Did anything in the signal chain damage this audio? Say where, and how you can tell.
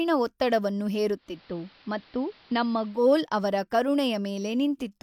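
Yes, at the receiver: a digital radio blending to analogue from 1.14 to 3.17 s. Over a 0.3 s cross-fade the speech drops to AM, level down about 1 dB, and hiss some 30 dB under the signal, before blending back.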